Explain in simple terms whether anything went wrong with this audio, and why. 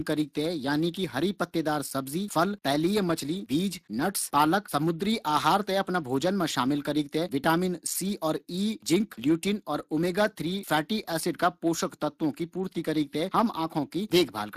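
Yes, something went wrong. From start to finish the speech sounds plainly rough and hoarse, with a noisy grain. This is Speex codec damage: the older voice-chat codec rebuilds speech from a simplified model and has too little detail to recreate it cleanly.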